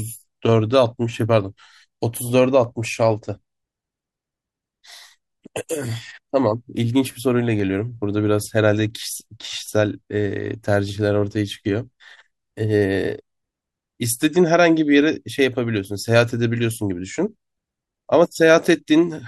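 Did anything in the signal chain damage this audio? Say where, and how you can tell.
Yes: regular clicks every 0.83 s from 0.17 to 19.16 s through the speech, likely clock drift buffer slips, where a mismatch of around 200 ppm forces a few samples to be dropped or repeated.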